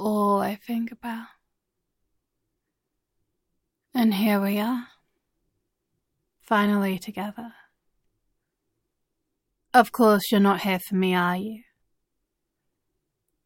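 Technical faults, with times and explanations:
8.08–8.11 s and 11.77–11.81 s, chunks out of order: in each spot a short block of audio, which fits 10 ms chunks, was delivered or written late and played after blocks that should have followed it, roughly 20 ms late at 8.08 s and 30 ms late at 11.77 s. Nothing is missing, but the sequence is scrambled, and the three hard joins each swap creates give a brief jumbled flutter.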